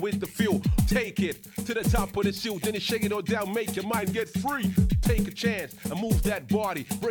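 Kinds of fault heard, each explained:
Drift correction step: from 3.98 to 5.05 s the whole sound runs 6.15 percent slow and sits 110 cents flat, a touch more than a semitone, then snaps straight back. Speed and pitch move together, so it's a playback rate change rather than any pitch effect. That's likely clock-matching software jumping the rate in a single step to refill its buffer, instead of easing it over gradually.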